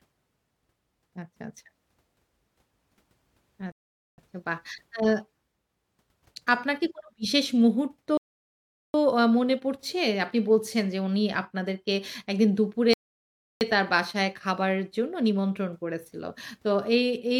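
Three rebuffering stalls interrupt the speech at 3.72 s, 8.17 s and 12.93 s, adding 0.46 s, 0.77 s and 0.68 s of silence. Each time the player drained its buffer and waited for data, then resumed exactly where it stopped, so nothing is lost.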